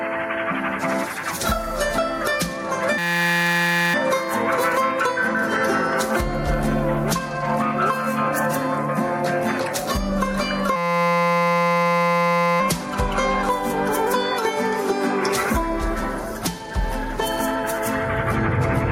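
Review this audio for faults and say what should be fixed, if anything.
Gain pumping runs through the whole clip, with the gain swinging by roughly 10 dB, likely from input gain set far too high with a fast limiter clamping it. The waveform envelope looks flattened, and the spectrogram's noise floor brightens between events. Lower the input gain and relax or remove the limiter.

A system hang loop occurs from 2.98 to 3.94 s and again from 10.76 to 12.60 s. A single 5.8 ms slice repeats exactly, producing a steady 172 Hz buzz, which fits a 256-sample buffer cycling after a freeze. The waveform shows identical repeating cycles, and the spectrogram shows flat harmonic lines at multiples of 172 Hz. Fix the driver or system stall so the audio buffer keeps being refilled.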